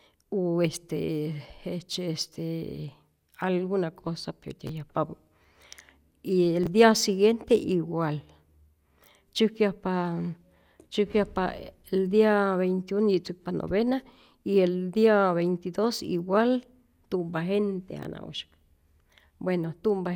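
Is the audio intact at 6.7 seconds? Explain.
No. Chunks out of order: between 6.64 and 6.67 s, a 10.7 ms chunk was delivered late and plays after the chunks that should follow it, consistent with a two-chunk delay. Nothing is lost, but three hard joins make a brief garbled moment just before "dia siguiente igual".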